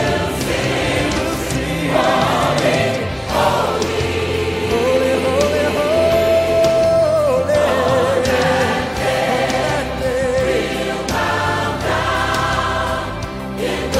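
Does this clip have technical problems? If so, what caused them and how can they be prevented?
Yes. From the start to 2.76 s, a doubled audio track: a dry copy about 5 dB quieter, roughly a second late, likely from a slower second capture path. Use one path.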